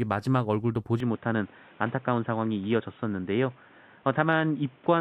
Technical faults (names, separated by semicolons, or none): input switched to a poorer device